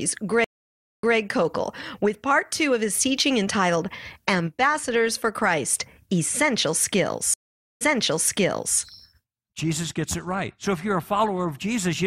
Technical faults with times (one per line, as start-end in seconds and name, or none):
0.44-1.16 stream reconnect
7.34-8.78 stream reconnect